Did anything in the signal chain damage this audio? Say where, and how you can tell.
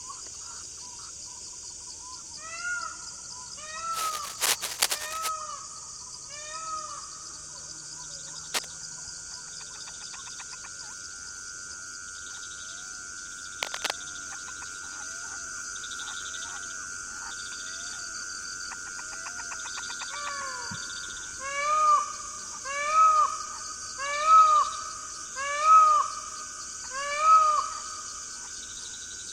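Yes. Rustling scratches about as loud as the sound itself at 3.92–5.30, 8.54–8.69 and 13.63–13.91 s: cable scratch noise, likely from a worn analogue connector's fluctuating contact.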